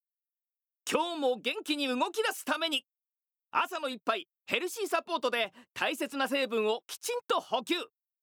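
At 5.44 s there's a block of digital silence, a tiny 0.67 ms dropout, likely where the output buffer wasn't filled in time, which fits a 32-sample block. The signal snaps to silence and back with no fade, so it comes across as a tick or dip.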